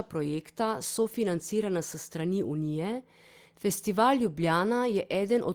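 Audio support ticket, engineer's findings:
Nothing stood out on listening to the speech.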